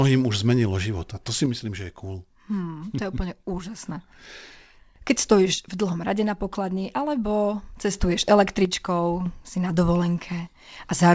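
A stereo channel likely drops out three times, from 1.46 to 3.86 s, 5.54 to 7.93 s and 8.65 to 9.26 s. Each time the mono sum loses half its source, so the speech falls abruptly by about 6 dB, then recovers. The band-limited call sound stops at 8 kHz.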